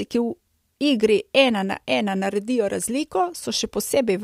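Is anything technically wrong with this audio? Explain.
No, nothing in the clip points to a technical fault.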